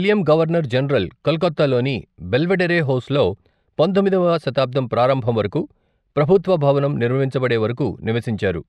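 No technical faults can be heard in this recording.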